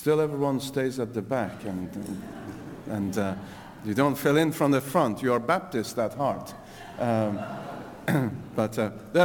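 Crude rate conversion affects the audio throughout. A gritty, inharmonic fizz rides on the louder and brighter passages at roughly 30 dB below the signal, consistent with a 48 kHz to 44.1 kHz change done by picking the nearest sample with no filtering. Samples are dropped in a regular cycle set by the two rates, so the timing error repeats and generates tones unrelated to the material, following its level and high-frequency content.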